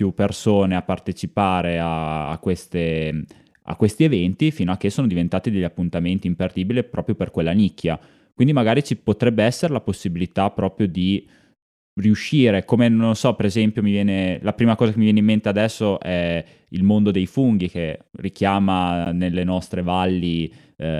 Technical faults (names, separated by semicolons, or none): corrupt frame decoded